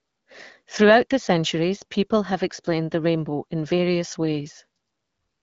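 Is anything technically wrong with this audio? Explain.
No, nothing is wrong: the speech is carried over an AMR wideband (HD Voice) path at 12.65 kbit/s, and the lack of content above about 7.4 kHz is simply that codec's band limit.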